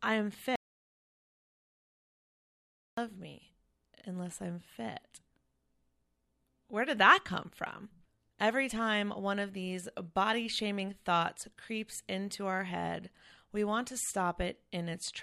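At 0.56 s, right after "I am", the speech cuts to dead silence. This is an audio dropout to silence, with no room tone left. It lasts 2.42 s, until "me unless I'm fit" at 2.97 s. The input was likely lost while silence was recorded.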